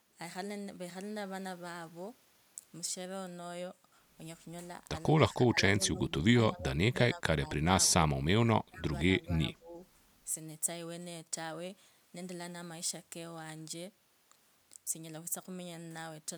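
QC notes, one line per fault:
5.35–5.59 s, 5.77–6.12 s, 6.33–7.65 s, 8.14–8.91 s and 9.20–9.80 s: speech suppressed in double talk. The speech dips and breaks up in short pieces. The drops reach about 25 dB at worst. Likely cause: both sides talking at once, so the echo canceller turned the near talker down along with the echo.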